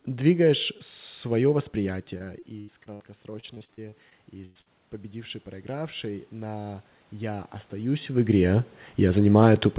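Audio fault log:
1.8–8.58 s, automatic gain rising: Right after "двигаешь свое", the input level drops by about 14 dB as the talker moves back. The gain control responds slowly, raising its gain by about 12 dB. Voice and room noise swell together over several seconds.
2.18–3.02 s and 3.40–4.68 s, repeated packet loss (robotic sound): Short gaps keep recurring, up to 79 ms and then 102 ms long. Each one is patched by stretching the last sound, covering about a quarter of each stretch. The speech turns choppy, with pieces missing.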